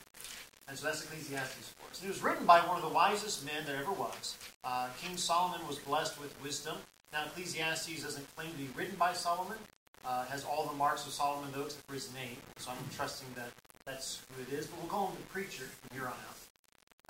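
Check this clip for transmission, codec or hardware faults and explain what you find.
One fault runs through the whole clip, from start to finish: low bit depth without dither, the likely cause of a grainy distortion that fits rounding to 7 bits. The error sits roughly 20 dB below the signal and follows it, unlike ordinary hiss, which stays steady regardless of what the sound is doing.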